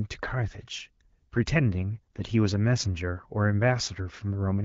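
No faults are audible in this speech, which carries the band-limited character of an AMR wideband (HD Voice) link at a mid rate.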